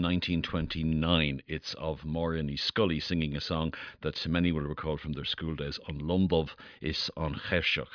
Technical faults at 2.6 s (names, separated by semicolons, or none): none